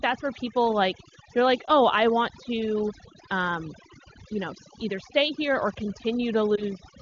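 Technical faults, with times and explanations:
Throughout, overdone noise removal. The background has dropped, dotted with twinkling specks. A noise reduction stage was set too hard. It pushes individual frequency bands far down, or off, whenever they sit near its noise estimate. Quiet parts of the speech fall below that line and vanish with the noise. The isolated bands left flickering on and off produce the specks.
1.66 to 1.71 s and 6.56 to 6.62 s, lost AMR speech frames. The first comes after "people like they're like" and before "i want to um". Each is a brief dip or warble, about 20 ms of missing sound, a single frame. Radio errors corrupted the frame. The decoder then reused the last good pitch and vocal tract settings at lower gain. The wideband codec itself sounds clean, which points to its top rate of 23.85 kbit/s.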